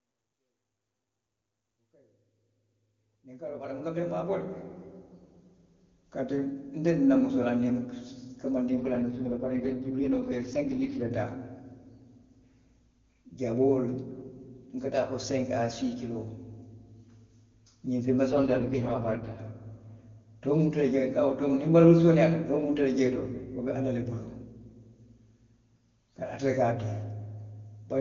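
From 8.70 to 11.12 s, and again from 18.31 to 19.40 s just after "ňiŋ feŋ", an AMR rate drop turns the speech rough and synthetic without a gap or band loss. The texture fits the codec falling from 23.85 to 6.6 kbit/s, trading detail for error protection.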